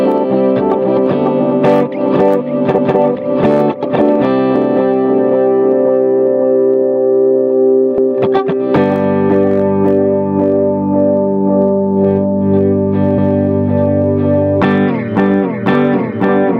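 Overlapping chunks at 2.78, 7.98 and 13.18 s: each 5-second block starts 200 ms early, so that slice of sound plays twice, a stutter every 5.2 s.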